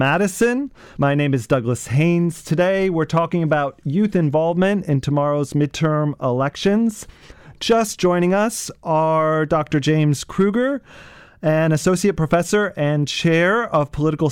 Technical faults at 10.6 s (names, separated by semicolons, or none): hard clipping